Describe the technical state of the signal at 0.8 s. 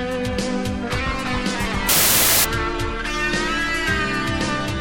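At 0.8 s the signal is intact, with no audible technical fault at that point.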